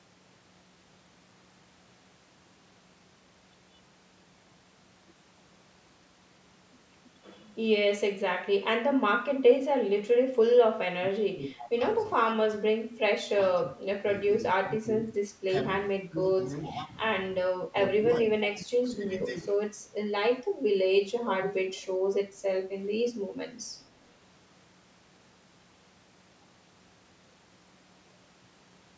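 From 10.87 s to 19.52 s the speech repeatedly sinks and partly drops out, in six bursts: 10.87–11.81 s, 12.33–14.05 s, 14.64–15.52 s, 16.02–16.93 s, 17.50–17.76 s and 18.07–19.52 s. The deepest dips fall by about 20 dB, shallower in the third and fourth bursts, and in most bursts up to about a second is pulled down. This is likely speech suppressed in double talk: with both sides talking at once, the echo canceller could not tell this talker from the loudspeaker echo and turned both down.

At 21.42–21.86 s a faint, delayed copy of the voice trails in, lagging by 436 ms and sitting about 10 dB under the speech. Like the rest of the speech, it is a band that stops at 8 kHz. This is likely an echo leak, from a far end on loudspeaker whose canceller let part of its microphone pickup slip back into the call.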